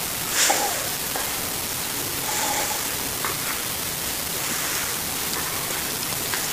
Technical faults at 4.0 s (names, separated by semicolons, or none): unreliable data bit